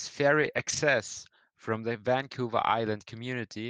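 From 0.41 to 0.63 s the sound turns rougher and noisier for about 120 ms with no gap: a lost packet rebuilt from error correction, where the decoder played low-bitrate Opus backup copies carried in the following packets.

At 0.65 to 0.68 s a brief smear or wobble appears. This is short concealed packet loss: about 20 ms arrived too late, and the receiver extended the preceding sound to cover the hole before blending back.

Straight after, from 0.68 to 0.78 s, the same coarse, noisy texture returns for about 60 ms, again lost packets rebuilt from error correction copies.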